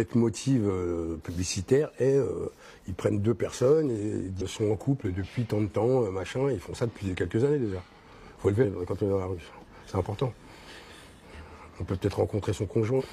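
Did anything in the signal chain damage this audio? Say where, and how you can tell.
Yes, damaged data in a compressed stream at the codec/storage stage: brief glitches at 4.37–4.42, 8.60–8.66, 11.29–11.34 and 12.96–13.02 s. Corrupted frames make the decoder misread them and resync. A buffer underrun would leave silence instead of a decoder resync.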